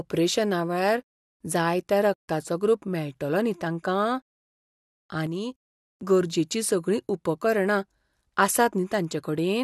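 From 5.27 to 5.81 s, one channel drops out, likely a lost stereo channel upstream of the mono sum. For about half a second the speech falls abruptly by about 6 dB, then snaps back just before "गरजेचीं सगळीं".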